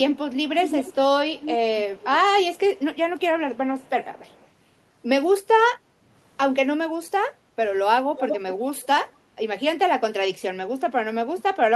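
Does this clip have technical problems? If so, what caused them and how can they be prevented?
Yes. There's an echo leak: a delayed copy of the speech, about 204 ms behind, at 0.14–0.18, 0.64–0.95, 1.34–2.05, 2.56–3.21, 3.54–4.48 and 8.17–8.39 s. It's faint in some spots, about 10 dB down in others, and near 8.2 s only about 5 dB below the speech. The likely cause is a far-end speakerphone whose echo canceller let its mic pickup slip back. Using headsets or better-tuned echo cancellation at that end would stop it.

Around 7.32–7.57 s the background is gated by the echo canceller. It clamped the mic while the loudspeaker played, so the room sound dips by about 9 dB for roughly a third of a second before coming back. Gentler suppression, or comfort noise filling the gap, would smooth that over.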